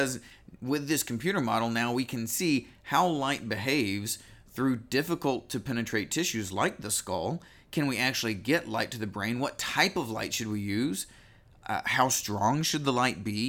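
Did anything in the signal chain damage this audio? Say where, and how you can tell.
No, nothing in the signal chain damaged this audio.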